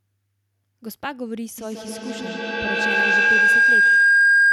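Feedback howl from 1.58 s to the end: a microphone picks up a loudspeaker on the same call, and each trip round the loop adds level. The sound narrows into a tone near 1.5 kHz that pulses roughly every 150 ms and peaks about 14 dB above the speech.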